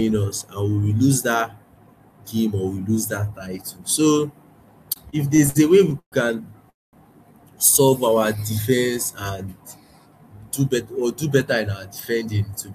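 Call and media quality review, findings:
Repeated stalls (stutter), 4.93 to 6.14 s: speech drags and stutters through eight short holds, longest 128 ms, about 300 ms filled in total, a quarter of the span. Jitter buffer repeatedly underrunning on late packets, concealment extending the last sound; nothing lost.

Call audio freeze, 6.70 to 6.95 s: sound holds, then drops to about 200 ms of silence, 229 ms inserted before speech resumes where it stopped. Likely jitter buffer underrun from delayed packets; playout delay up 229 ms, no content missing.

Jitter buffer slow-down, 7.85 to 8.92 s: speech runs at 90% speed, pitch unchanged, sounds drawn out. Time-stretching repeats pitch periods and pause fragments to rebuild buffer reserve, adding 109 ms.

Jitter buffer speed-up, 10.90 to 12.72 s, just after "do bet": speech hurried at 108% speed, same pitch. Buffer above target, so short pitch-period segments are cut repeatedly to shed excess delay, around 150 ms removed.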